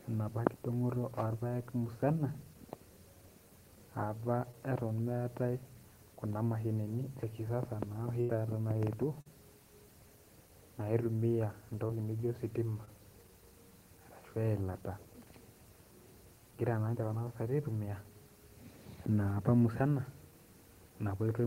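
A brief smear or wobble in the speech at 4.51–4.55 s is short concealed packet loss. About 20 ms of audio never arrived in time, and the decoder bridged the hole by extending the preceding sound before blending back into the real signal.

At 8.21–8.31 s, a held buzz or fading hiss replaces the speech, and the audio then resumes slightly further on. This is a burst of packet loss. Roughly 80 ms went missing in a row, and the receiver padded the gap with a decaying continuation of the last sound, so that stretch is simply gone.

The same short smearing returns at 9.21–9.27 s, where about 40 ms was lost, and at 11.87–11.91 s and 12.85–12.89 s, where about 20 ms was lost each time. In each case concealment papered over the missing packets.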